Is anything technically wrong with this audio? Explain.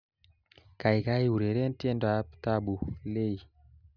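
No, the signal carries through without any audible technical fault.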